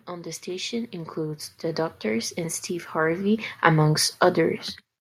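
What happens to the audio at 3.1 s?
The automatic gain control judged the input too quiet and kept raising its gain from 0.06 to 4.03 s, about 15 dB overall, so at 3.1 s speech and background swell up together.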